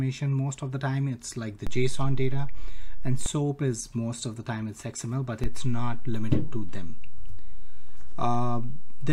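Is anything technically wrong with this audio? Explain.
Yes. Two DC steps occur: the waveform's zero line jumps by about -19 dBFS from 1.67 to 3.26 s, then by about -20 dBFS from 5.44 s to the end. Each sudden baseline shift sounds as a low thump at 1.67, 3.26 and 5.44 s, while the sound carries on unchanged.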